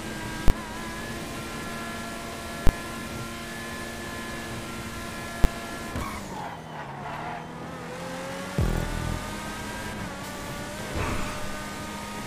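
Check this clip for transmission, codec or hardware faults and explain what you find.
Three sharp bangs at 0.48–0.50 s, 2.67–2.69 s and 5.44 s are invalid numbers at full scale. A calculation spat out infinite or invalid values that were pinned to maximum level for 20 ms, 20 ms and 10 ms, too short for anything but a single loud bang each.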